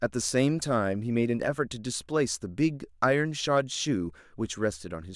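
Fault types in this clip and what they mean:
Nothing stood out on listening to this speech recording.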